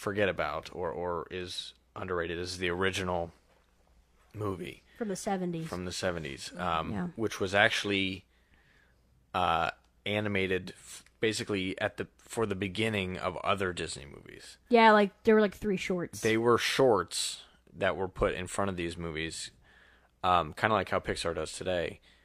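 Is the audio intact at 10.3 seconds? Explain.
Yes, the speech at 10.3 seconds is intact, with no audible fault at that moment.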